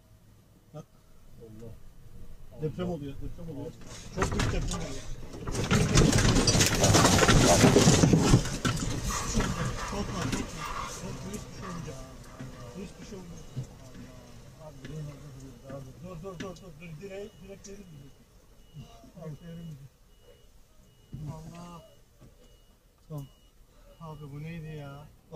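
From 6.54 to 7.86 s, a block size mismatch (padded) zero-fills each block, giving an 86.1 Hz buzz and slowing sound to 0.938 speed with timbre unchanged.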